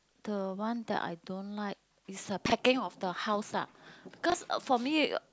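At 2.46 to 2.52 s and again at 4.30 to 4.34 s the speech has chunks out of order: a 20 ms block plays two blocks late, then one block late, giving a brief jumbled stutter. The waveform and spectrogram show hard vertical discontinuities at each splice.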